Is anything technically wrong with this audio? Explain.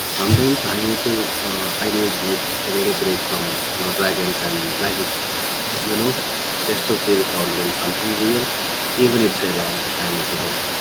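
Yes, there are three faults.

Sample clock jitter runs through the whole clip. The converter's sampling instants wander by a couple of microseconds. Where the waveform changes fastest, that timing error becomes an amplitude error, so a rough, hissy layer follows the speech at roughly 25 dB below it. It rises on loud and sibilant sounds and drops away in the pauses, because it exists only where the signal does.

Speech suppressed in double talk occurs from 0.03 to 0.14 s. The voice dips by around 20 dB for roughly a tenth of a second. The likely cause is an echo canceller facing both talkers at once. It could not tell near-end speech from loudspeaker echo, so it attenuated everything until the overlap passed.

Echo leak runs from 0.17 s to the end. A delayed copy of the speech trails the original by 391 ms, sitting around 10 dB below it. The likely cause is a far end listening on a loudspeaker whose echo canceller failed to remove all of the pickup in its microphone. 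The residue was sent back down the line.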